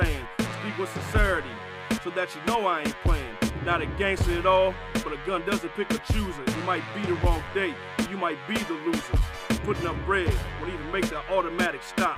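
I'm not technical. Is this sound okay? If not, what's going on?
Yes, this sound is okay. Nothing in it stands out as a technical problem.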